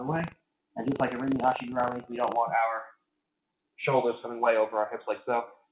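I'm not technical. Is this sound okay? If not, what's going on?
No. From the start to 2.37 s there's buffer tearing: a steady robotic rattle, 25 times a second, as tiny slivers of sound from about 70 ms earlier get spliced in. Nothing drops to silence.

Between 0.31 and 0.76 s there's sound cut by the noise suppressor: the sound sinks sharply in level.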